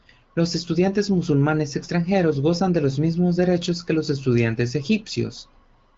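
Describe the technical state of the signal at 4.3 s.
At 4.3 s the speech is intact, with no fault at that moment, only the HD Voice band limit, which leaves nothing above about 7.5 kHz.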